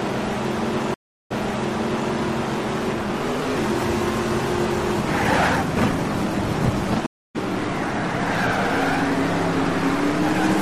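At 0.94 s and again at 7.06 s a stream reconnect breaks the audio: the connection drops, a fresh decoder restarts mid-stream, and a waveform shows flat gaps of 363 ms and 284 ms. The first resumes 0.81 s earlier, repeating material; the second skips ahead roughly 0.3 s.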